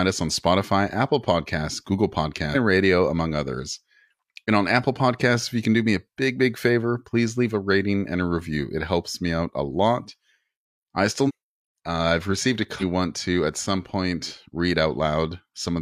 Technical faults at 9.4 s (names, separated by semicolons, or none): none